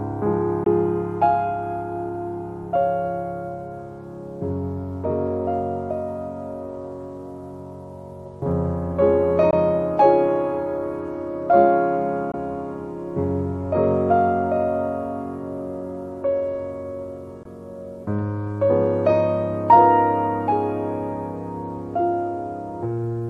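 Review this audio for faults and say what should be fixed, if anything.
Four silent holes of about 20 ms each, at 0.64, 9.51, 12.32 and 17.43 s, with the sound resuming as if it had played on through the gap, are likely a Bluetooth dropout, each fitting a single lost packet. Keeping the headphones close to the source, with nothing blocking the path and less 2.4 GHz interference nearby, should prevent it.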